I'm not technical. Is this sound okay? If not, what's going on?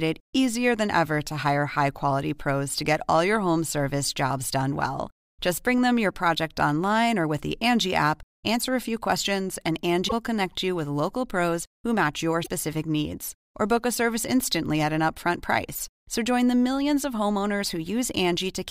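No. The speech has two brief glitches, at 10.07 to 10.13 s and at 12.42 to 12.48 s, each lasting about 0.06 s, roughly two MP3 frames. The likely cause is a broken MP3 bit reservoir: some audio pieces went missing, so the pieces right after the gap tried to use data that wasn't there and decoded as garbled sound. A simple dropout would just go quiet and carry on, but here the speech also skips ahead.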